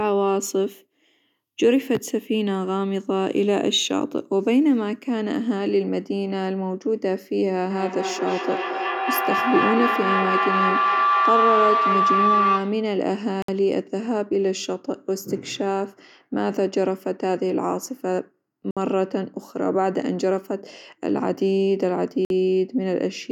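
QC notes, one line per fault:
7.7 to 12.99 s, feedback howl: a tone near 1 kHz builds and peaks about 2 dB above the speech, repeating roughly every fifth of a second. Two devices sharing a room and a call form a loop in which each pass from microphone to loudspeaker and back returns louder than before, so the repeats grow instead of dying away. The loop favours one frequency band, which narrows into the tone until the loop is broken.
13.42, 18.71 and 22.25 s, Bluetooth stall: the sound drops to silence for 61, 58 and 52 ms, then resumes. This pattern likely comes from interference on the wireless link delaying packets, so the headphones' small buffer empties and playback halts until the resent data arrives. The gaps are short, clean and sharply edged, with no fade on either side, because output simply pauses and then continues.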